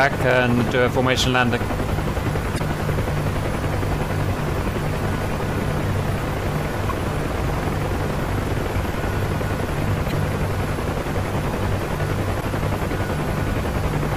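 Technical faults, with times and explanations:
2.55–2.60 s, 6.89–6.92 s, 10.07–10.13 s and 12.37–12.43 s: damaged data in a compressed stream. Corrupted frames are misread by the decoder, which loses sync and hunts for the next header. Each burst is a short chirp, squawk, click or hole, appearing as a narrow, abrupt break on a spectrogram and an abrupt irregular patch in the waveform.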